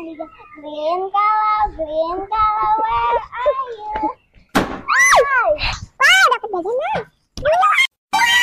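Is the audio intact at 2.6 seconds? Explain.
Yes, the audio at 2.6 seconds is intact, with no dropout, click, distortion or other fault at that moment.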